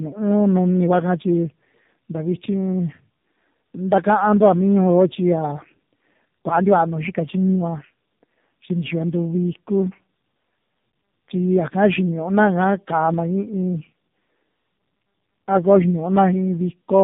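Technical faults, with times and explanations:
Throughout: tandem speech coding. The speech passes through three speech coders in a row. The sound fits a chain of CVSD, G.729A and AMR-NB at about 7.4 kbit/s, with A-law links between them. Each coder receives speech the previous one has already degraded and adds its own errors. The result is rough, muffled and warbly. Nothing reaches above 3.8 kHz, so sibilants and consonant detail are dull.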